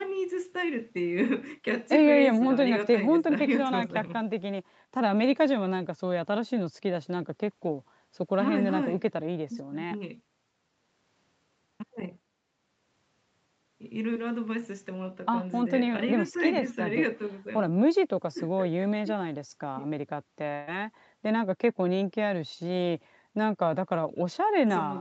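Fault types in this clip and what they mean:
Short concealed packet loss: at about 14.13 to 14.17 s, roughly 20 ms of speech arrived too late, and the decoder bridged it by extending the previous sound, heard as a brief smear. A spectrogram shows a thin, featureless strip, and the waveform shows a short, unnaturally regular stretch.
Burst of packet loss: from 20.55 to 20.69 s, about 120 ms went missing. The decoder stretched the last sound across the gap and faded it before speech resumes further on. Spectrogram: a frozen, fading band. Waveform: a decaying, repetitive envelope.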